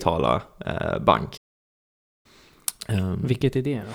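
A speech clip with a playback stall: at 1.37 s the sound cuts to silence mid-flow and stays out for about 0.87 s until 2.26 s, likely because the player ran out of data or its thread was blocked. A brief dropout lasts milliseconds; this stall is nearly a second.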